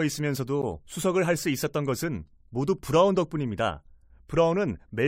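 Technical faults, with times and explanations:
0.62 s gap between stream segments: timestamps of adjacent segments leave a 14 ms hole that plays as hard-edged silence, a flat waveform dropout and a blank vertical spectrogram stripe.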